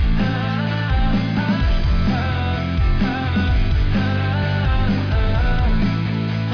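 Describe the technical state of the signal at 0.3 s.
The signal at 0.3 s is intact, with no fault audible at that moment.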